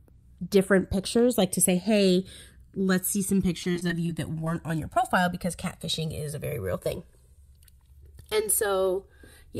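A speech recording carries two faults. First, channels drifting apart: the left and right sides were captured on devices running from separate clocks, off by a few hundred parts per million, so the offset between them creeps up to around 3 ms by the end. Folded to mono, the resulting comb notches glide through the spectrum, heard as a slow flanging wash across the whole clip. Second, repeated packet loss (robotic sound) between 3.63 and 4.48 s: data kept going missing or arriving late, with about 120 ms lost in holes no longer than 25 ms. Each hole was patched by extending the preceding sound, about 149 ms in total, so this stretch turns choppy, with small pieces dropped out.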